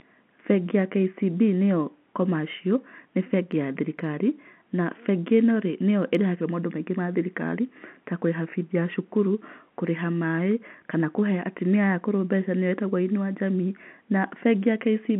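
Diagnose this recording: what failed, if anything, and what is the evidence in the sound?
Nothing failed: the speech sits in an ordinary telephone band of roughly 150 Hz to 3.5 kHz, consistent with a 64 kbps G.711 mu-law line, with no dropouts, clicks, distortion or timing breaks anywhere in it.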